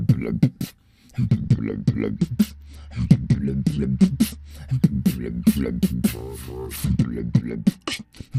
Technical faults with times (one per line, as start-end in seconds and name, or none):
1.28-4.51 Bluetooth SBC bit pool drop
6.67-8.38 Bluetooth SBC bit pool drop